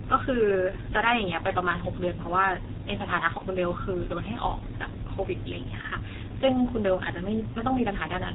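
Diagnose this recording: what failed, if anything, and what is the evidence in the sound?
The codec stage is the culprit throughout: a G.723.1 codec, muffled, hoarse and blurry on consonants, nothing above 4 kHz, consistent with its roughly 6 kbit/s rate.

Network side, there's VoIP packet loss concealed by the speech codec at 3.38–3.44 s and 5.81–5.86 s. Each gap is about 30 ms, filled with a fading extrapolation.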